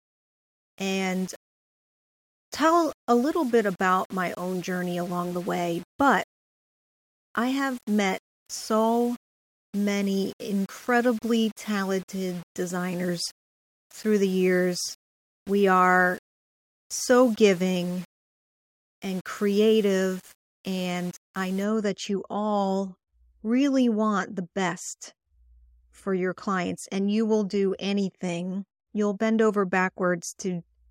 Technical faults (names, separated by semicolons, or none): low bit depth without dither